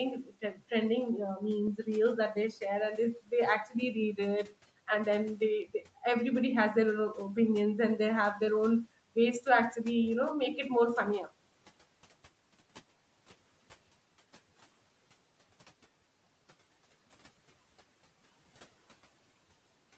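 From 0.17 to 0.61 s, speech cut by the noise suppressor: it mistook parts of the opening sound for room noise and pulled them down by up to about 12 dB, roughly a fifth of a second in all. Unlike a packet dropout, nothing goes fully silent; the sound just thins and fades.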